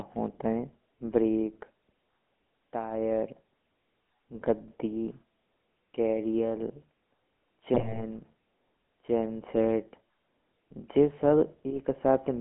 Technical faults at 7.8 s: GSM full-rate codec; GSM bit errors

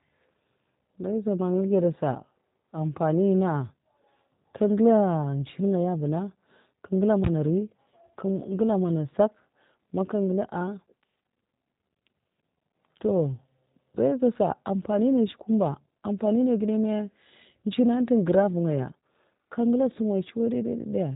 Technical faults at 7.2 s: G.729 codec; invalid numbers at full scale

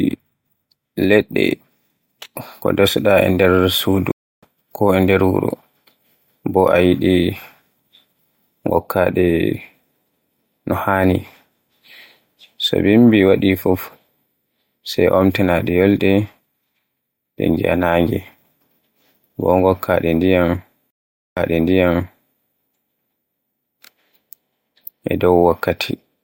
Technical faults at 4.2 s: stream reconnect

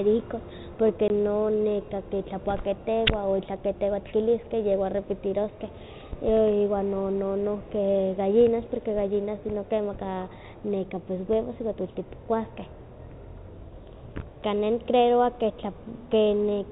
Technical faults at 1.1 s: packet loss filled with silence

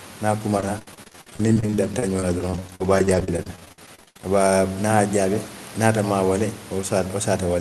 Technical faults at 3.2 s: repeated packet loss (robotic sound)

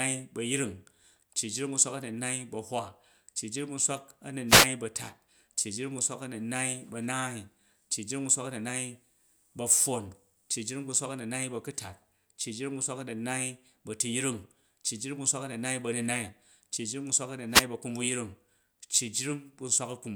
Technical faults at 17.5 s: wireless microphone noise hit

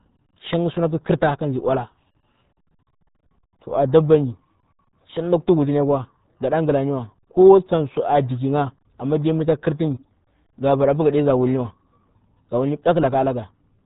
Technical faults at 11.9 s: RealAudio 14.4 codec

